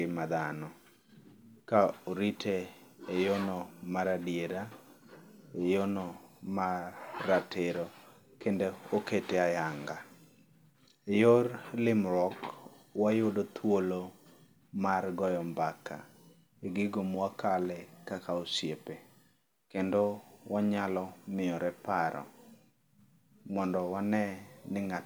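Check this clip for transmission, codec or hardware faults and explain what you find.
No faults turn up anywhere in this clip.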